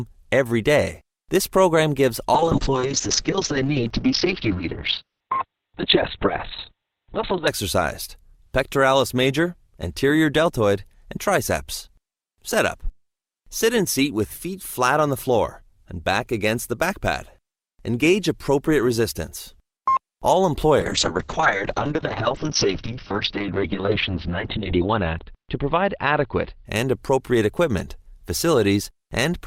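From 2.35 to 7.53 s the sound turns muffled and rough, with everything above 4 kHz gone. It clears, then degrades the same way from 20.81 to 26.71 s. Both are a call bitrate drop. The encoder was starved of bits, which fits a fall from 64 kbps to roughly 6 and then 8 kbps, so it coded coarsely and narrowed the bandwidth.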